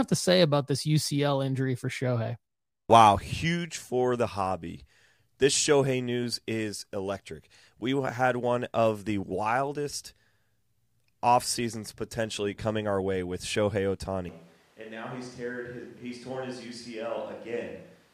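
Right at 14.29 s the speech suddenly turns roomy and hollow, loses its low end, and stays that way to the end of the clip, which points to a switch to a distant microphone. What likely happened is the close mic dropped out and the recording fell back on one further away, maybe the camera's. Level falls by about 10 dB, and the room noise comes up to roughly 25 dB below the speech.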